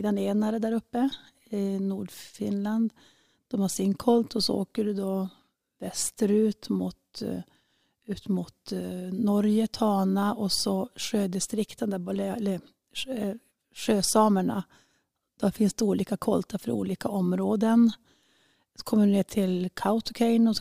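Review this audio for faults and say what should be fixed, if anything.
Nothing stood out on listening to this speech, so there is nothing here that needs fixing.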